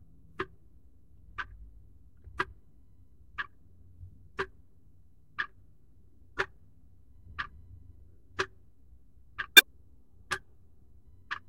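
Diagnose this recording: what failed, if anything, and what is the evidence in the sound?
The fault lies in the compressed stream, at the storage or codec stage: damaged data in a compressed stream. From 9.55 to 9.63 s, a span of about 80 ms, the everyday sound is interrupted by a brief disruption. Corrupted bytes made the decoder misread or reject those frames, lose sync and hunt for the next valid frame header. On a spectrogram or waveform, this shows as a sharply bounded 80 ms patch that breaks the surrounding texture, with abrupt edges at both ends.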